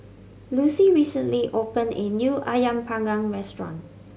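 No technical faults can be heard anywhere in the recording, with the signal holding steady and intact from its first moment to its last.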